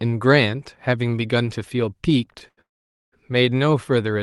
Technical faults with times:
2.38-2.59 short stall from a late packet
2.61-3.14 call audio freeze

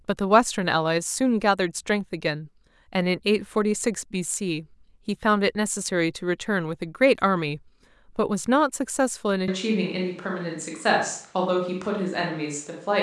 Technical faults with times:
9.48-13.02 switch to a distant microphone

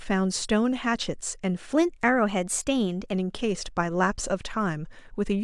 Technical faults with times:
1.75-3.13 wrong sample rate

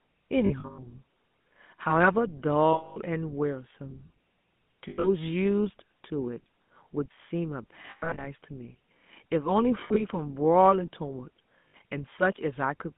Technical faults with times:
0.00-12.97 GSM full-rate codec
0.46-0.79 lost GSM frames
2.72-2.98 lost GSM frames
4.88-5.07 lost GSM frames
7.86-8.27 lost GSM frames
9.80-10.02 lost GSM frames
11.68-11.75 lost GSM frames

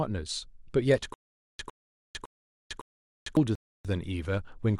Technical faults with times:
1.14-3.37 stutter with silent gaps
3.55-3.85 rebuffering stall

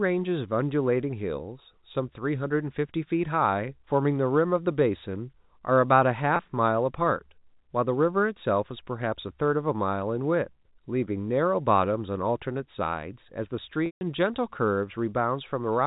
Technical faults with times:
6.36-6.39 packet loss with pitch repetition
13.86-14.01 packet loss with pitch repetition

